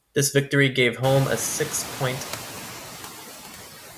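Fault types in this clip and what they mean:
Noise suppressor artifacts: A noise suppressor is working on this speech throughout, pulling down the bands it reads as steady noise by about 7 dB. The noise dips between words and swells under them. The room noise rises at about one second.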